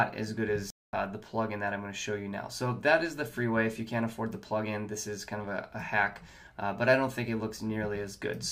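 A playback stall occurs at 0.70 s. The likely cause is that the player ran short of data or had its output thread held up, so nothing reached the output until it caught up again. The sound cuts off abruptly in mid-flow and the clip falls silent for about 230 ms. At 0.93 s the audio resumes, and the break is clearly audible as a sudden hole rather than a fade.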